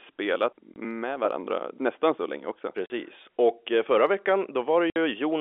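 Speech over a telephone-band G.711 line has packet loss filled with silence. Dropouts at 0.74–0.76 s, 2.86–2.90 s just after "nästan så länge också", and 4.90–4.96 s last 20, 40 and 60 ms, consistent with whole 20 ms packets. Each appears as a flat waveform gap and a blank vertical stripe on a spectrogram, with hard edges.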